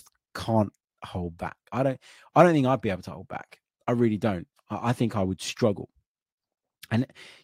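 No technical faults can be heard anywhere in the speech. Nothing in the recording calls for a timestamp or a correction.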